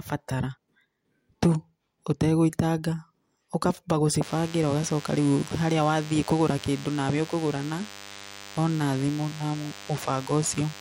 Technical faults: DECT cordless phone buzz

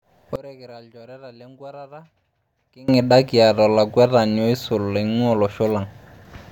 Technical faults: one channel inverted

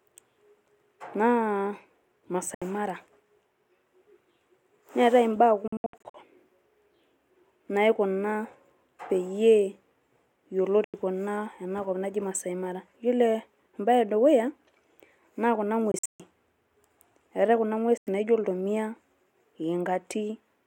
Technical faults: Bluetooth dropout

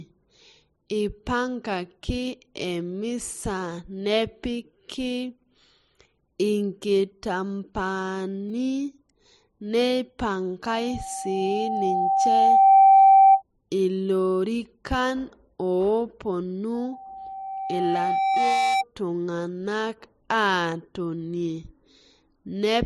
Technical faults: repeated buffer; loudspeaker feedback squeal

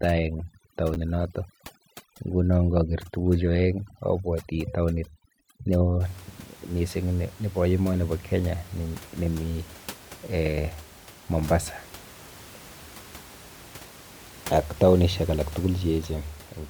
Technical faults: overdone noise removal; chunks out of order

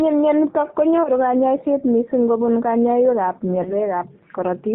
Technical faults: G.729 codec; VoIP packet loss concealed by the speech codec

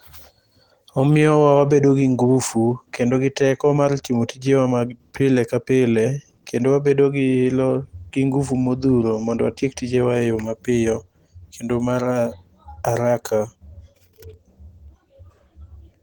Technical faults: Opus compression

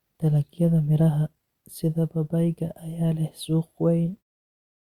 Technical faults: none

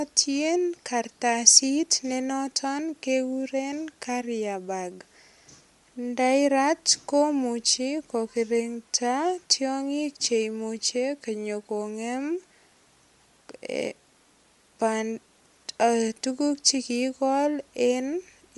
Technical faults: Bluetooth LC3 compression

